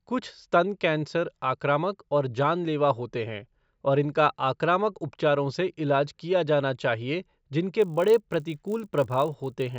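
From 7.8 s to the end at 9.79 s, right after "इलाज किया जाना चाहिए", a resampler restarted on every block converts 16 kHz to 48 kHz in isolated 20 ms chunks, leaving an edge error each time. The result is a 50 Hz buzz, visible as evenly spaced vertical stripes on a spectrogram and as tiny periodic glitches in the waveform.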